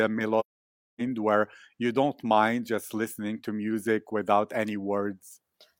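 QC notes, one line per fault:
0.39 to 1.01 s, AAC frame loss with muting: a run of consecutive AAC frames never reached the decoder, roughly 0.6 s of coded audio, which fits about fourteen frames. The decoder zeroed their spectral content instead of guessing at it, so the overlapping transform windows taper the speech down into silence and bring it back up over about one frame at each edge. The result is a soft-edged gap, ending just before "where you don't mind".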